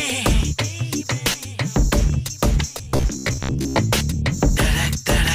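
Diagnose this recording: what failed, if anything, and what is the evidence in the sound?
Driver or buffer stage: robotic sound from repeated short buffers at 2.78–3.79 s, likely from 15 ms repeats, giving a rigid 66.7 Hz buzz and evenly spaced spectrogram harmonics.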